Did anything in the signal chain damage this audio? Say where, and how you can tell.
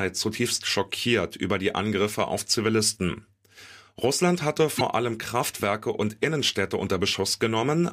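Yes. At 4.77 to 4.81 s the speech jumps forward. This is likely a broken MP3 bit reservoir at the codec or storage stage: frames were lost, so the next frame, roughly 26 ms long, decoded borrowed bits from the wrong data.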